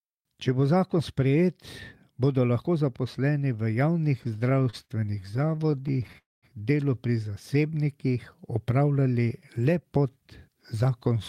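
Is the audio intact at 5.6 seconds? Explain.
No. At 5.6 seconds the speech sits inside a run of repeated stalls (stutter) lasting from 4.23 to 6.17 s. Packets were reaching the receiver late or more slowly than playback consumed them, so its jitter buffer kept running dry. Each time, it stretched out the last bit of sound until data resumed, with the longest hold about 44 ms. Nothing is lost, but roughly a fifth of that stretch is filler, so the speech drags and stutters.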